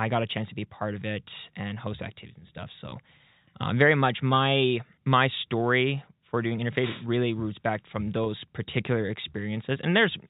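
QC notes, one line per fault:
2.90 to 2.92 s and 8.24 to 8.26 s, packet loss with pitch repetition: about 20 ms of sound drops out each time, which fits two lost 10 ms packets. The receiver fills the hole by repeating the last pitch period. Each gap is short, so the repeat never fades to silence. It is heard as a brief held, slightly buzzy tone before the sound picks up again.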